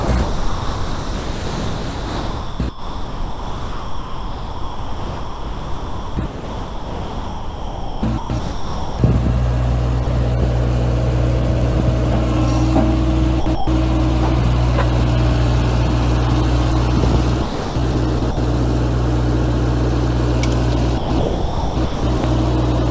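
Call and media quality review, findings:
Sound chopped by the voice detector, 0.00–8.99 s: about 8.4 s of the first 9 s replaced by comfort noise, with real audio surviving only in brief fragments. Likely the sender's voice detector toggling transmission, with the receiver filling gaps with comfort noise.

Same chopping at 13.40–13.67 s (180 ms filled), 17.42–18.37 s (450 ms filled) and 20.98–22.24 s (930 ms filled). Choppy texture. Likely the same detector gating on quieter passages.

Sound dropped by the voice detector, 10.04–10.07 s: 30 ms of audio gives way to steady comfort noise, then audio resumes. Likely the detector misjudging a quiet stretch as background and halting transmission until it retriggered. Carried over the G.722 call path at 64 kbps, nothing above 8 kHz.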